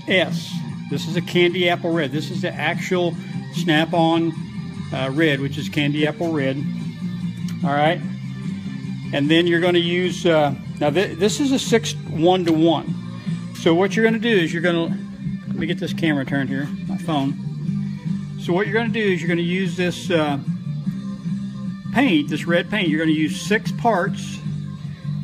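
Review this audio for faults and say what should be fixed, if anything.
Nothing needs to be fixed, because the review turns up no faults in the audio.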